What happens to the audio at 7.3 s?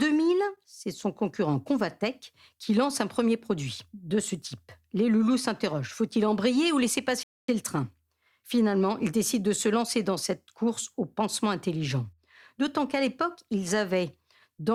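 At 7.23 s the speech halts in a rebuffering stall: right after "embrayer ou laisser" the player runs out of downloaded audio and falls silent until more data arrives at 7.48 s, then picks up exactly where it left off with "le train". Nothing is skipped, but about 0.25 s of dead air is inserted. On a waveform it shows as a flat line; on a spectrogram, a clean vertical blank gap with hard edges.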